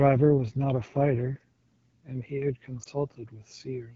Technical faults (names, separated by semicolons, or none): AMR wideband (HD Voice) codec; lost AMR speech frames